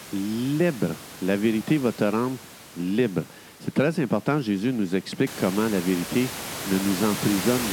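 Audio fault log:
No system faults are present in this speech clip. Room noise rises by about 12 dB at around five and a half seconds and then sits about 9 dB below the speech, which is background in the room captured by the microphone.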